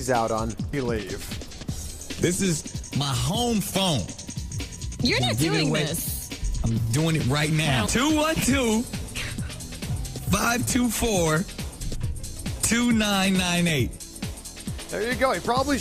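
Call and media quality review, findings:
Skip ahead at 0.73 s. Playback jumps forward abruptly with no fill, and roughly 0.7 s of audio never plays. The two sides of the cut are spliced almost directly. Probable component: receive path or jitter buffer. Later audio was already queued, so the lost stretch was discarded on the way or dropped on buffer overflow. Playout delay shrinks by about the same amount.

Jitter buffer speed-up, 0.83–1.92 s, then 2.61–5.36 s. The audio runs hurried at unchanged pitch: 6% fast in the first span, 8% fast in the second. Roughly 70 ms and then roughly 200 ms of material are removed. Mechanism: the buffer is overfilled, consistent with delayed packets arriving in a burst, and the receiver trims short pitch-period-length segments repeatedly to pull latency back toward target.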